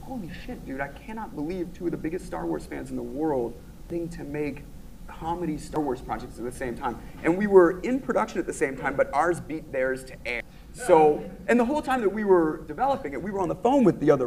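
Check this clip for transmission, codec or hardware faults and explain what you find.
There are three abrupt skips in the audio, at 3.90 s, 5.76 s and 10.40 s. Each is a jump forward in the sound with no gap of silence: roughly a third of a second is missing at 3.90 s and 10.40 s, and roughly a tenth of a second at 5.76 s. This is likely a dropped buffer (overrun), where capture fell behind, the hardware overwrote unread samples, and the surviving audio was spliced end to end.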